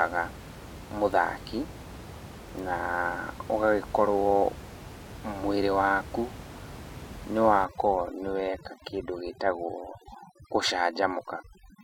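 From 7.65 s to the end at 11.84 s, overdone noise removal sets in: an over-aggressive noise reducer shuts off individual frequency bands near its noise estimate, so the room noise, about 16 dB below the speech, collapses into near silence with twinkling specks. A simple gate would cut everything at once instead.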